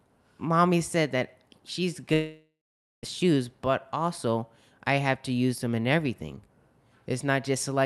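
A long network dropout runs from 2.13 to 3.05 s in this speech recording, ending just before "shoes but also I". Across that span no new sound arrives. The receiver stretches the last fragment into a buzzy continuation that fades out and gives way to about half a second of near silence. When the audio resumes, roughly 0.9 s of the original is missing. A stall in packet delivery on the network is the likely cause. The high end of the audio rolls off around 12 kHz, which fits an Opus call codec.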